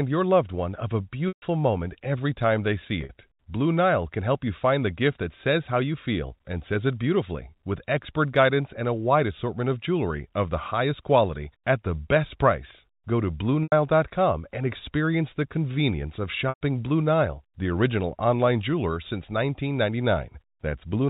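Packet loss with pitch repetition at 1.28 s (140 ms, before "moment every time they"), 3.01 s (after "every time they see"), 13.63 s, and 16.49 s (after "experience the convenience of"). The receiver repeats the last pitch period, so the sound briefly holds and buzzes, then fades to silence before the speech cross-fades back.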